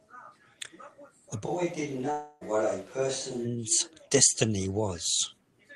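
At 1.48 s the voice abruptly turns roomy and hollow, with thinner bass and a level roughly 5 dB lower, and stays that way until 3.44 s, when it snaps back to its close, full sound. This is a switch to a distant microphone, the close microphone's signal having likely dropped out so that a farther one carried the sound. On a spectrogram the low end thins across that span, reverberant smearing blurs the edges of syllables, and a steady noise floor sits roughly 30 dB below the speech. The waveform steps down in amplitude at the start and back up at the end.

Inside that stretch, from 2.11 to 2.43 s, comes a long network dropout. Roughly 0.3 s of audio never arrived, likely through lost packets, and the receiver filled almost all of the gap by extending the last sound into a fading buzz or hiss rather than leaving silence. When the sound resumes, the missing portion is simply gone. On a spectrogram the gap appears as smeared bands that lose energy without any real speech structure, and the waveform shows a decaying pattern in place of syllables.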